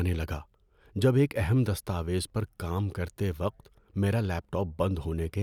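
No audible faults detected.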